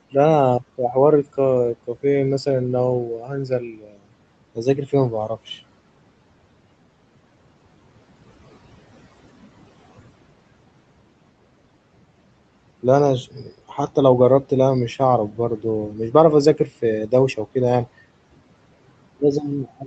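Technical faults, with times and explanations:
0.6–1.39 s, 3.18–4.06 s, 4.55–5.37 s, 13.28–13.72 s, 15.31–15.6 s and 16.57–17.38 s, speech cut by the noise suppressor: parts of the speech sound swallowed and faint, dropping by up to about 19 dB. The longest loss is near 3.2–4.1 s, where most of a second fades. The suppressor mistook these quieter stretches of speech for background noise and turned them down along with it.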